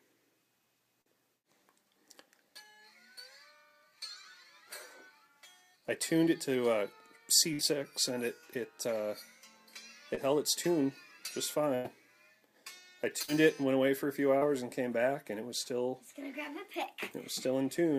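Short concealed packet loss at 1.01, 10.15 and 14.38 s: roughly 20 to 40 ms failed to arrive, and extrapolated fill leaves a brief smear or wobble. A burst of packet loss at 7.53, 11.75 and 13.22 s drops about 60, 100 and 60 ms. The fill fades into a held buzz or hiss, and the audio resumes further on.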